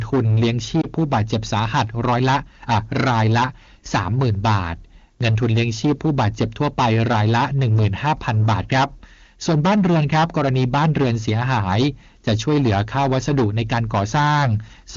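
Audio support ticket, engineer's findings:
Hard clipping, whole clip: harsh fuzz on every loud syllable, peaks sheared flat. Some stage is overdriven by about 15 dB, so around a sixth of samples hit the ceiling. Check input gain.

Lost AMR speech frames, 0.81 to 0.86 s: brief dip or warble, then speech returns slightly rough. Sounds like a single dropped 20 ms frame; the decoder papered over it by repeating the last good frame's parameters with falling gain.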